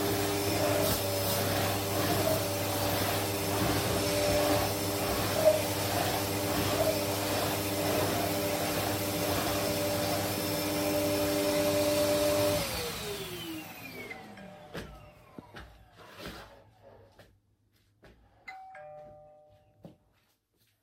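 No technical faults can be heard anywhere in this recording of sounds.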